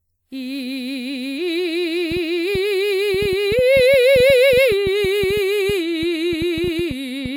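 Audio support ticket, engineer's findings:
Generation loss, whole clip: music sounds swirly, smeared and hollow, attacks blurred. Likely repeated WMA re-encodes, roughly five passes at 96 kbit/s, each stacking fresh quantisation noise.

Train of clicks, 2.12 to 7.27 s: about 30 ticks at roughly 6.2 per second, unevenly spaced, peaking about 5 dB over the music. Likely interference or a faulty connection.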